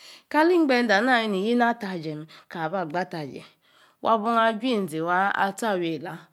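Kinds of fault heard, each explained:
No technical faults can be heard in the speech; the signal stays continuous throughout.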